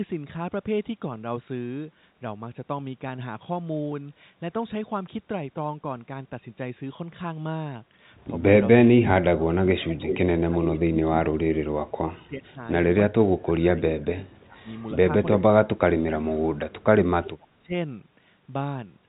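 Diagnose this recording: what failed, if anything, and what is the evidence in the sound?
Clock drift buffer slips, 0.6 to 18.86 s: about twenty clicks recur every 0.83 s. The buffer between two mismatched device clocks likely overflows or runs dry, dropping or repeating about 15 samples each time.

Speech suppressed in double talk, 8.77–12.6, 13.1–13.81, 14.22–14.66, 15.36–16.59 and 17.21–17.75 s: the speech dips by up to about 35 dB and breaks up. The call's echo canceller, likely confused by simultaneous talk, is turning everything down.

Echo leak at 10.1–10.18, 14.02–14.44 and 15.31–15.36 s: delayed copies of the speech arrive 392 ms and 323 ms late, from about 5 dB to about 35 dB below it. Loudspeaker pickup is likely escaping the far end's echo cancellation.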